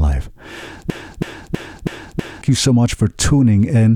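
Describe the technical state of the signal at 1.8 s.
At 1.8 s you're right in the middle of a broken-record loop that runs from 0.9 to 2.42 s. A chunk of speech about 0.32 s long plays five times back to back, identical on every pass, like a skipping CD. The likely cause is a stalled player or stream that kept resending the last fragment it had, so the audio that belonged in that stretch is gone. Normal playback resumes at "you so much".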